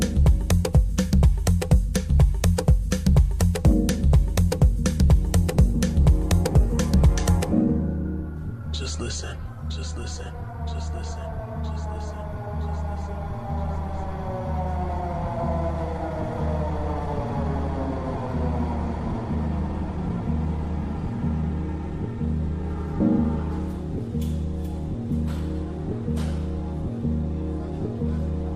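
No technical faults can be heard anywhere in the audio.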